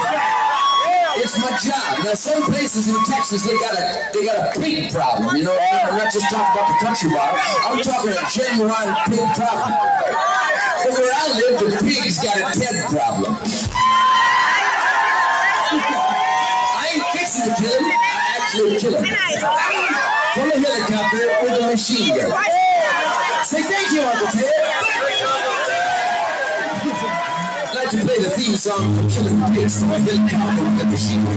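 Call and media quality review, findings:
Sound cut by the noise suppressor, 26.27 to 27.8 s. Level sinks by up to about 8 dB for roughly one and a half seconds. Probable component: the noise suppressor, misclassifying the sound as noise and applying gain reduction. Spectrogram: energy across bands fades together in that window, below the 8 kHz ceiling of the call path. Waveform: the envelope visibly shrinks, then recovers after 27.8 s.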